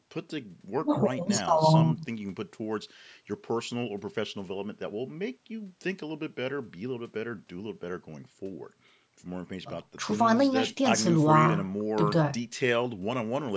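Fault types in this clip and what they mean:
No technical faults can be heard in this speech recording. It has passed through a call's microphone processing, so the lowest bass is trimmed away and nothing reaches above 8 kHz.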